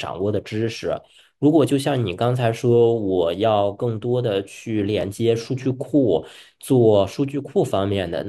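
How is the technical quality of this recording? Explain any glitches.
One glitch stands out. At 5.01 to 5.03 s, chunks play out of order: a 10 ms chunk arrives one chunk late and follows its successor. Nothing is lost, but the three hard joins make a brief jumbled moment. A waveform shows abrupt discontinuities there, and a spectrogram shows thin vertical broadband lines.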